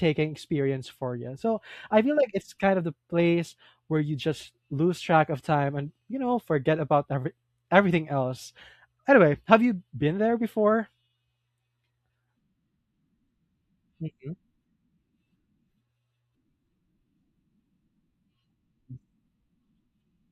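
No technical faults are audible anywhere in this speech recording.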